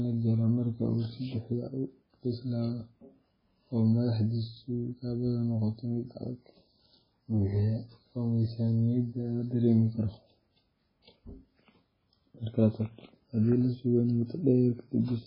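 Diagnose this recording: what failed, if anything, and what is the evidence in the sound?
The codec stage is the likely failure: the speech has been through heavy MP3 compression, consistent with a very low bitrate of around 16 kbps. Starved of bits, the encoder discards the treble outright, so nothing survives above 5.3 kHz for the whole recording, dulling s sounds. Weak frequency lines are zeroed and return frame by frame, giving the watery, swirling texture heard throughout, and consonant onsets come out smeared.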